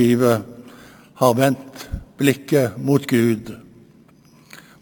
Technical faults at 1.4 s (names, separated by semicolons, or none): imaging from sample-and-hold upsampling